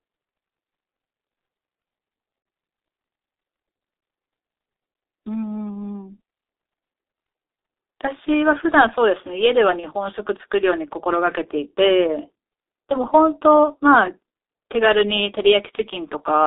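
From start to finish, the speech carries G.723.1 codec damage. The band runs only from 300 Hz to 3.7 kHz. The voice sounds muffled and hoarse, and consonants smear. The heavy coarseness points to a low bitrate near 6.3 kbit/s, in 30 ms frames.

At 2.42 s and again at 9.80 s, there is VoIP packet loss concealed by the speech codec. Each gap fits one lost 30 ms frame. The decoder repeats its last pitch and filter at falling gain, so the speech briefly turns into a fading buzzy tone or coloured noise and stays weak.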